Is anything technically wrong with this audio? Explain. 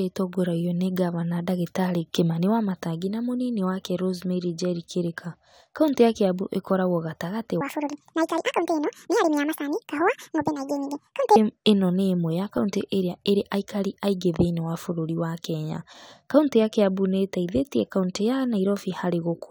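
Yes. From 7.61 to 11.36 s the speech plays at the wrong speed, running about 1.77 times faster than the surrounding audio. The likely cause is that this stretch was played against the wrong clock, so every cycle is squeezed shorter. Pitch and tempo therefore rise together: the voice jumps up by roughly ten semitones and sounds hurried and chipmunk-like. That joint change separates it from a pure pitch shift or a time-stretch, where only one of the two moves.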